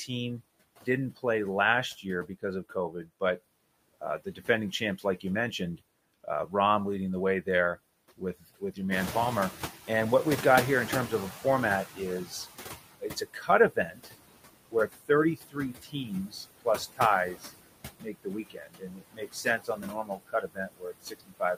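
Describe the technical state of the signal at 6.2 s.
At 6.2 s the signal is inside a stretch of speech cut by the noise suppressor, running from 5.77 to 6.53 s, just before "leading the way". The suppressor mistakes soft speech energy for background noise and turns it down by up to about 11 dB, so parts of the sound, about a tenth of a second in total, come out swallowed and faint. Unlike a dropout or a mute, the speech is dimmed rather than silenced.

Noise suppressor artifacts are also present, as they are throughout the clip. Frame by frame, the suppressor lowers bands it judges to be steady noise by about 20 dB. Unlike plain room noise, this residue pumps and shifts with the speech.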